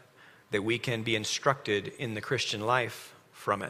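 Nothing in this audio stands out as a technical fault; it just runs along without any glitch or hiccup worth pointing to.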